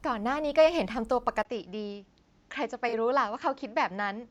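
An input switch to a poorer device is the likely cause of the change at 1.43 s: after a 20 ms gap, the speech loses everything above 7.6 kHz, drops about 5 dB in level, and picks up a new, faint noise floor, leaving it duller through the end.

AAC frame loss with concealment follows from 2.88 to 2.94 s. For about 43 ms, roughly two frames' worth, the decoder patched the missing data from the preceding spectrum, producing a brief smeared, noisy blur in the speech.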